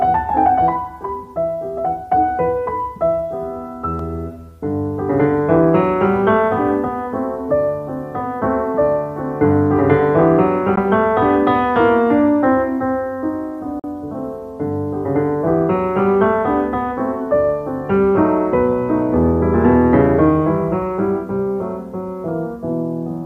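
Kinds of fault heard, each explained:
Bluetooth dropout: The sound cuts to silence twice, briefly, at 10.76 to 10.79 s and again at 13.79 to 13.84 s. Each gap has abrupt or briefly faded edges. When the sound returns it has moved on, as if it kept playing through the hole. About 14 ms of audio goes missing in the first gap and about 42 ms in the second. The likely cause is wireless packets arriving too late and being discarded.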